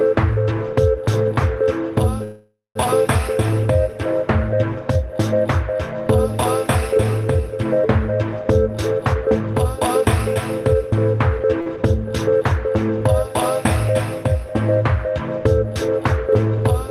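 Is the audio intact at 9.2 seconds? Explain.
No. From 8.73 to 11.45 s a jitter buffer speed-up trims short pitch-period slices, roughly a third of a second in all, so the sound runs about 11% fast. Unlike a resampling error, its pitch stays unchanged.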